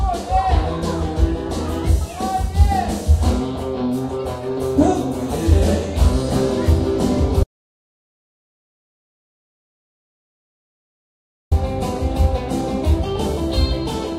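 At 7.43 s the sound cuts out to silence, no room tone, until 11.51 s; about 4.1 s is lost, likely an audio dropout to silence from a disconnected input.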